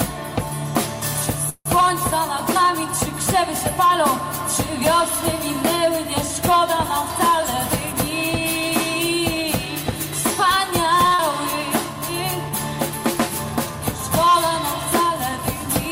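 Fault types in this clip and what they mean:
Call audio freeze: Around 1.49 to 1.67 s the sound hangs on its last bit for about 160 ms, tails off into roughly 60 ms of silence, then carries on where it stopped with nothing lost. That's likely packets held up in transit, leaving the jitter buffer empty.
Jitter buffer speed-up: From 9.66 to 11.05 s the buffer was holding more than it wanted, so it trimmed tiny pitch-period slices again and again, around 70 ms in total. The audio plays at about 105% speed, same pitch, slightly rushed.
Short stall from a late packet: At 11.08 to 11.13 s a packet wasn't there in time, so the receiver stretched the current sound for 28 ms until it showed up. Nothing goes missing, but that sound lingers a touch with a faint buzz or dip.
Short concealed packet loss: Right after, from 11.15 to 11.21 s, about 80 ms of audio never arrived. The receiver papered over it with 39 ms of continued sound, so you hear a quick smear or wobble, and the delay drops by roughly 40 ms.
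Jitter buffer slow-down: Between 11.85 and 12.51 s the buffer built its reserve back up by repeating single pitch periods, adding 37 ms. Playback drops to about 96% speed at unchanged pitch, so sounds get drawn out, maybe with a slight warble.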